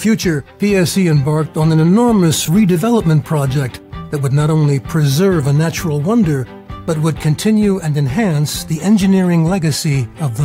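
Lost LE Audio frames at 2.38–2.48 s: about 70 ms went missing in short runs of up to roughly 20 ms. The LC3 decoder refilled each gap with the previous spectrum under random signs, so the sound smears into brief noisy flutters.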